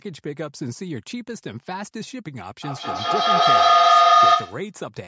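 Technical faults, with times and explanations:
2.62–4.75 s feedback howl: a room-loop tone near 1.5 kHz swells to about 15 dB above the speech, with the loop repeating roughly every 200 ms. Unlike echo, each repeat grows rather than fades.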